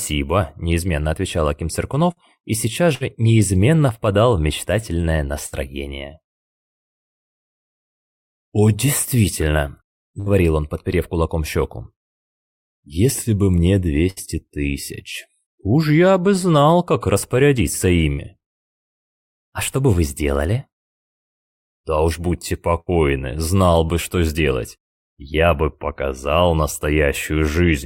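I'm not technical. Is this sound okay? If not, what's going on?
No. There are seven short hiccups, at 2.11, 2.95, 5.46, 10.2, 14.1, 18.12 and 22.8 seconds. Each is a burst of packet loss. A small piece of the sound, about 60 ms, never arrived. The player covered the hole by stretching the last bit of sound for about a twentieth of a second, fading it out. You may hear a brief buzz or hiss. Then the sound jumps ahead, with that piece missing.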